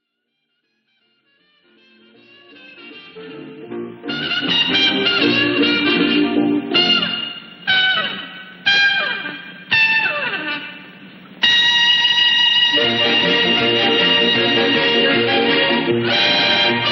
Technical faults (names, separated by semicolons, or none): none